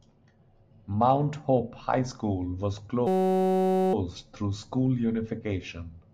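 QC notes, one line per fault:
3.07–3.94 s, system hang loop: the playback stalled while the hardware kept replaying one 5.33 ms slice of the ring buffer, which fits a 256-sample buffer, about 162 times, so the speech gives way to a steady 188 Hz buzz before resuming.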